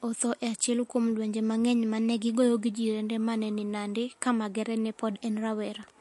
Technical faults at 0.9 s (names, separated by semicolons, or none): MP3 compression